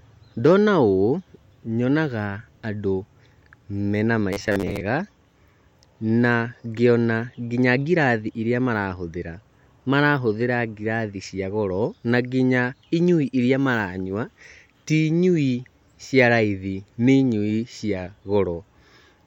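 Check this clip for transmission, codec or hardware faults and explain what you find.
One fault stands out. From 4.33 to 4.83 s, the speech takes on robotic sound from repeated short buffers. For that half second it becomes a rigid, metallic buzz at 100 Hz. The phrasing stays roughly traceable. The likely cause is late-arriving audio. The playback side repeats the last 10 ms segment to fill the gaps, and real audio is skipped. About half the sound in this stretch is repetition. The 10 ms loop imposes the fixed 100 Hz buzz.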